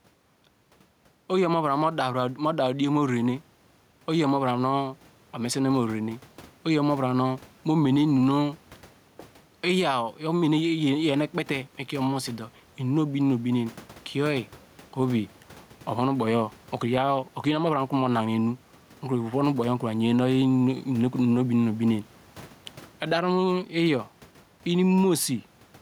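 Gain pumping runs through the whole clip. The room noise sits about 33 dB under the speech, and the gain swings by around 10 dB. That points to an input gain likely set far too high, with a fast limiter repeatedly hauling it down. Unlike a noise gate, the background never cuts to silence. The speech stays squashed.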